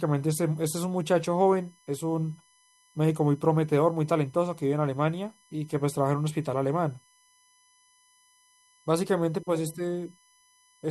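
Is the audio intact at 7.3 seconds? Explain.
No, a USB whine runs through the whole clip: the bus's 1 ms frame current leaks into the power or ground, giving a faint fixed 1 kHz whine, strongest at 11 kHz.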